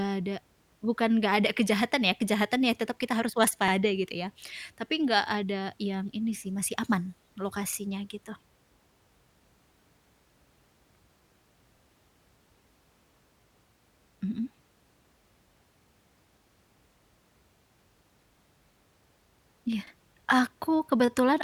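Overlapping chunks occur at 3.68–3.73 s (between "ya tetap kita harus" and "gitu ya"), 7.73–7.78, 11.78–11.82, 15.82–15.87 and 19.87–19.92 s. Each 4.0 s block begins 48 ms early, so that slice replays as a short stutter at every join.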